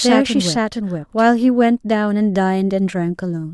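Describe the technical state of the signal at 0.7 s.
A doubled audio track runs from the start of the clip to 1.3 s, so at 0.7 s the speech is heard twice: a full-band copy at roughly equal level trails about half a second behind, with no decay or room colour. The likely cause is a second, slower capture path or out-of-step copies in an edit.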